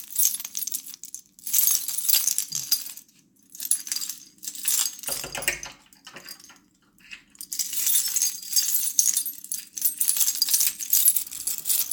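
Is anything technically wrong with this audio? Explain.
No, nothing technically wrong can be heard here.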